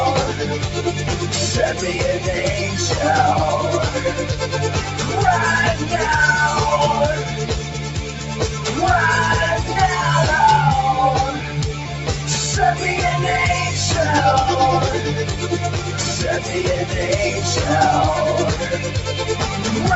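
A noise suppressor applied to music or sounds stays active across the whole clip. Built for speech, it treats sustained tones, ambience and reverberant tails as noise and pulls them down, while onsets pass largely intact. The resulting gain riding swings by roughly 5 dB, so held material sinks and recovers with an audible pumping, thinning the body of the sound. All of this sits inside a band that stops near 8 kHz, which points to a wideband call codec such as Opus.

Sound cut by the noise suppressor occurs twice. From 7.63 to 8.65 s, around 0.7 s of the sound is pushed down harder than its surroundings, with the deepest dip about 4 dB. The same happens from 15.22 to 15.99 s, affecting about 0.4 s with a drop of about 4 dB.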